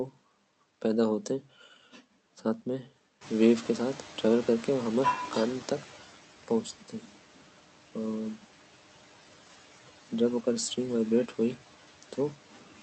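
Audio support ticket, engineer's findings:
Noise suppressor artifacts, whole clip: suppressor cutting steady-noise bands by about 11 dB frame by frame. Background drops between words and swells under them. Probable component: call-path noise suppression; codec stage band-limited to 8 kHz.

Noise suppressor catching up, 3.21 to 5.98 s: room noise jumps about 15 dB around 3 s, and the suppressor's noise estimate lags. Noise passes with less reduction at first, then sinks over about 2.8 s as the estimate adapts, ending near 9 dB of cut.

Speech cut by the noise suppressor, 6.43 to 7.16 s and 12.52 to 12.8 s: suppressor misclassifying quiet speech as noise, with gain drops down to about 11 dB. Affected speech sounds swallowed or faint, roughly a fifth of a second in the first span and a tenth in the second.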